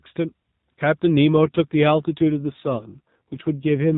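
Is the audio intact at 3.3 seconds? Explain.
No. An AMR rate drop runs from 1.36 s to the end of the clip. The codec has been told to spend fewer bits on the speech, in a way that fits a fall from 12.2 to 5.9 kbps. The band stays the same and nothing drops out, but the voice turns rougher, buzzier and more synthetic.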